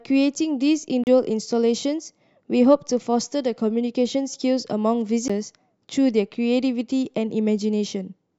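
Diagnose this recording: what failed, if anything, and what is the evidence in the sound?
A CD skip at playback: brief ticks and mutes at 1.04–1.07 s and 5.28 s, then the speech jumps as the laser hops a spiral turn.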